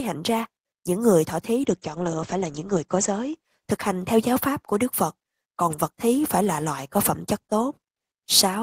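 From 1.62 to 3.53 s, right after "những người thọ thí", the call's bandwidth estimate fell and the encoder was forced onto far fewer bits. This is a call bitrate drop, and its sound fits a fall from 32 to 15 kbps. At that rate Opus codes the speech more coarsely and narrows its band from 20 kHz to 8 kHz. The voice turns muffled and somewhat rough, worst for about 1.1 s, before clarity returns by "thực hành theo giáo".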